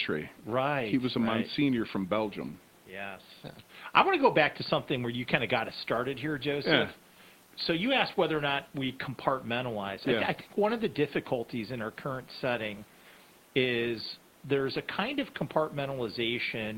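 Nothing goes wrong in this speech recording, and the only other sound is the quiet background noise of the room, sitting roughly 32 to 36 dB below the speech.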